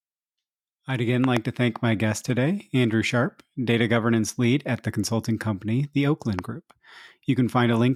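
Speech clip with three loud pops. After "I'd again", a double pop runs from 1.24 to 1.39 s, and a single one lands at 6.39–6.41 s after "the consulting company the", both standing well above the speech. The likely cause is a voltage pulse from a plug, switch or static discharge. Unlike a dropout or an edit glitch, the speech carries on intact beneath each thump rather than being cut.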